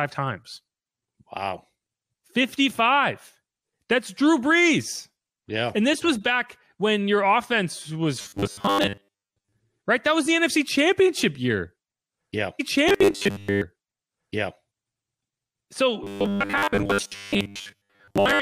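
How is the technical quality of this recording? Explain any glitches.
The recording has two kinds of playback glitches in this speech clip: bursts of robotic buzz and one stretch of repeated audio.

Robotic sound from repeated short buffers, 8.22–9.53 s, 12.89–13.63 s and 16.04 s to the end: likely late-arriving audio patched by looping roughly 10 ms chunks, imposing a metallic 100 Hz buzz.

Stream segment repeated, 12.59–14.58 s: the same segment was queued twice, so about 2.0 s replays after a small blip at the jump back.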